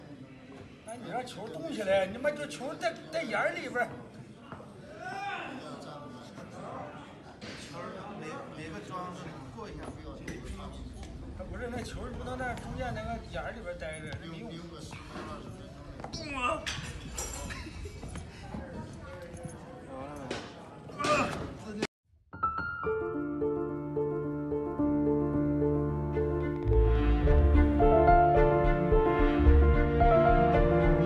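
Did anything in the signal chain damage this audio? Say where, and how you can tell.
Yes. A train of clicks runs from 26.41 to 27.39 s: about ten similar pops, irregularly spaced, roughly eight per second, as loud as the sound itself. Likely interference in the analogue wiring or a faulty connection or power supply.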